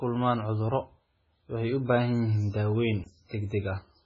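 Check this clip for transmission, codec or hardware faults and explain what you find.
Two faults are audible: codec damage throughout the speech and one brief dropout.

MP3 compression, throughout: heavy watery, swirling artefacts and nothing above 7.5 kHz, likely from MP3 encoding at a very low bitrate, around 16 kbps.

Block of digital silence, 3.04 to 3.06 s: a 20 ms run of zeros cuts the audio out and back abruptly, heard as a short hole.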